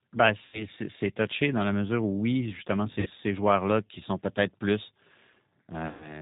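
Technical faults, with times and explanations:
Throughout, G.729 codec. The speech sounds rough and synthetic, with nothing above 4 kHz, which fits a G.729A stream at 8 kbit/s rebuilding speech from a few pulses per frame.
0.45 to 0.67 s, VoIP packet loss concealed by the speech codec. About 80 ms of audio is missing. The decoder stretches its last pitch into a fading buzz or coloured noise, and the speech stays weak or distorted for a moment as "touché dans la mesure" begins.
3.00 to 3.08 s, VoIP packet loss concealed by the speech codec. Just after "mesure où oui justement", about 60 ms are lost. The decoder extrapolates from its last pitch and filter into a fading buzzy tone or coloured noise.
5.87 to 6.21 s, VoIP packet loss concealed by the speech codec. About 140 ms are lost at the very end. Extrapolated sound fades into a buzzy tone or coloured noise before the clip ends.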